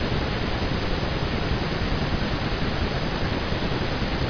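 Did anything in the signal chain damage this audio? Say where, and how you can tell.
No, nothing in the signal chain has damaged this speech recording. None of the stages between capture and playback leaves any audible mark on it.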